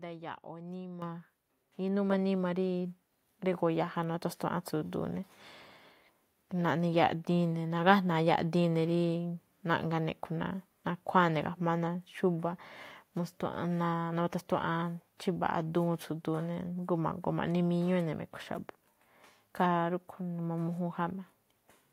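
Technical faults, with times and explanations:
1.02 s and 4.14 s: microphone volume stepped up. The level jumps by about 9 dB at 1.02 s, then by about 2 dB at 4.14 s. Speech and background rise together because the call software raised the device's input volume in single steps.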